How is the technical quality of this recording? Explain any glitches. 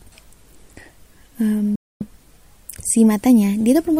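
The recording has one glitch, a Bluetooth dropout from 1.75 to 2.06 s. Packets likely failed to reach the headphones in time and were discarded, so the output cuts abruptly to silence for about 0.31 s, then resumes further along, as though the audio had kept playing.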